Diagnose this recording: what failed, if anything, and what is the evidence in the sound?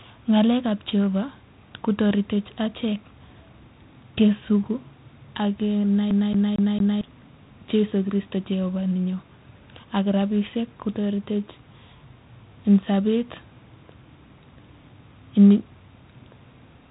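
The codec is the first culprit: 4-bit ADPCM compression, and fairly heavy. Every loud stretch of the speech carries a gritty hiss that rises and falls with the level, and sharp attacks smear because the adaptive step size can't grow quickly enough to follow them. Nothing comes through above 3.8 kHz, so the whole clip sounds dull. That band limit and the grit fit a 32 kbps ADPCM stream at a low sample rate.

The second failure is in playback, a CD stuck on one turn. From 6.11 to 7.01 s, the same 0.23 s slice of audio repeats four times, with a brief mute at each jump. That gives the fast, even stutter of a skipping disc. A scratch keeps knocking the laser back one track at the same point on each rotation, so the same loop plays until the pickup gets past it.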